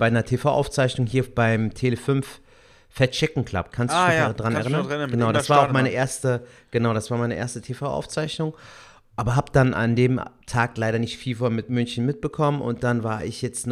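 Nothing goes wrong anywhere in this speech recording, so there's no technical fault to point to at any moment.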